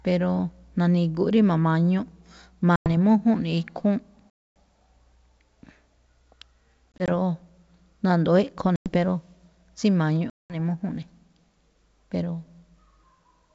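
Packet loss on an ADPCM call cuts hard-edged silent holes at 2.76–2.89, 4.31–4.56, 8.76–8.91 and 10.30–10.56 s. At 6.92–7.09 s, brief dropouts stutter. The decoder's predictor loses step. Each return is slightly distorted, then settles.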